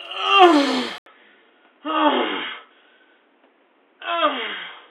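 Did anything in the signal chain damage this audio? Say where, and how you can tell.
Yes. From 0.98 s to the end the sound turns dull and boxy, with nothing above 3.8 kHz, a fresh noise floor roughly 40 dB down, and an 80 ms gap at the change but no level jump. This likely reflects the input switched to a poorer device at the driver stage.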